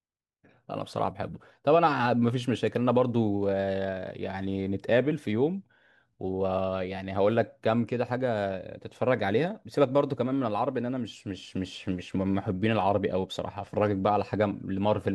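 No technical faults can be heard anywhere in the recording.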